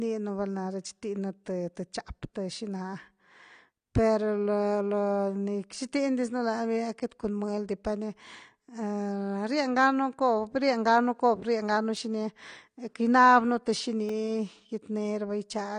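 Speech, with a dull, smeared top end, nothing above 9.9 kHz and a fizzy warble on sibilants, likely from AAC compression at a low bitrate around 32 kbps, unlike plain low-pass filtering, which would not warble. Two blocks of digital silence cut in hard: 2.7 ms at 11.96 s, just after "cobr rienganu", then 1.3 ms at 14.09 s. They point to buffer underruns of about 128 and 64 samples.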